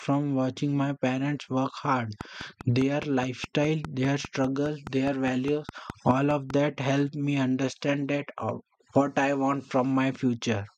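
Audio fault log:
2.21–6.51 s, train of clicks: after "my parents work hard", some twenty near-identical clicks tick at a steady 4.9 per second, peaking roughly 10 dB above the speech and audible through pauses, until "that helped me understand". Likely interference pulses or a faulty connection or power supply.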